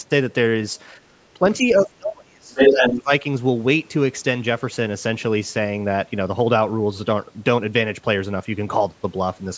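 Speech recorded over a call, with the echo canceller audibly acting on it three times. Around the first second, from 0.99 to 1.06 s, the room tone behind the talker briefly sinks by about 10 dB for roughly 70 ms and then springs back. That is background gated by the echo canceller: while the loudspeaker was playing, the canceller clamped the microphone down hard and released it moments later. From 1.34 to 3.12 s the talker's own voice repeatedly dips and fades. Across about one and a half seconds in total, the deepest cuts reach roughly 30 dB. This is speech suppressed in double talk, likely because the other party was talking at the same moment and the canceller could not tell the near voice from the loudspeaker echo, so it attenuated both. Inside that stretch, from 2.53 to 2.97 s, a second voice is audible, a few decibels louder than the talker. That is the other side's voice leaking through, most likely loudspeaker sound that the canceller failed to subtract from the microphone signal. 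The call's microphone processing is also present, with nothing above 8 kHz and the lowest bass trimmed, which is expected for a call.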